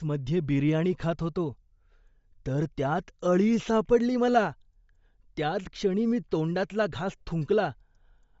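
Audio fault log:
Throughout, Bluetooth LC3 compression: the speech carries a plainly audible breathy, grainy edge, and nothing sounds above about 7.7 kHz. This is likely the LE Audio transform codec running lean. At a low rate it discards much of the upper spectrum in each short frame and fills the gaps with synthetic noise, which gives the voice its grainy texture. The band limit and the depth of damage fit a setting near 32 kbps with 10 ms frames.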